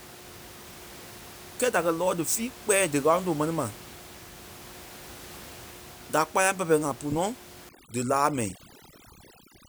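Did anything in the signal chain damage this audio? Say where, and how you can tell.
Yes. Call processing applied overdone noise removal from 7.69 s to the end. The room noise, about 20 dB below the speech, drops and breaks up into twinkling specks as quiet frequency bands are gated out. A lossy codec would smear the sound throughout rather than hollow out the background.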